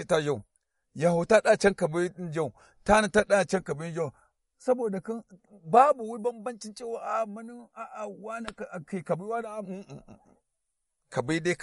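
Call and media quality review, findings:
Watery, swirling speech throughout; s sounds chirp metallically, consonant attacks smeared, treble gone above 11.2 kHz. MP3 compression, likely at a low bitrate that fits roughly 48 kbps. Weak frequency lines switching frame to frame; encoder low-pass removing top band.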